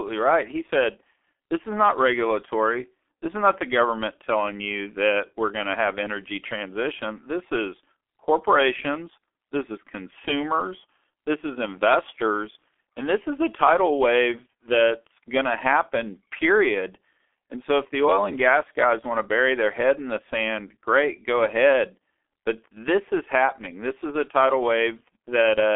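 From start to end the speech carries heavy G.723.1 codec damage. The sound is limited to a telephone band of 300 Hz to 3.4 kHz, with nothing above 3.7 kHz. Coding at 6.3 kbit/s in 30 ms frames leaves the voice muffled and hoarse, with smeared consonants.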